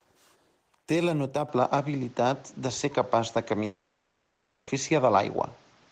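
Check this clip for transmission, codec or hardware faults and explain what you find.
Two faults are audible in this speech clip.

From 1.49 s to the end, the sound turns duller and boxier, with nothing above 7.6 kHz, new background noise roughly 35 dB under the speech, and a level shift of around 5 dB, with no gap at the change. This likely points to an input switched to a poorer device, whose narrower band, tone and noise floor replace the original microphone's.

From 3.65 s to 4.69 s, about 1.02 s of speech is replaced by a smeared, buzzy continuation of the last sound, and speech resumes with that stretch missing. This is likely a long network dropout: nothing arrived, so the receiver filled the entire gap with synthesized concealment.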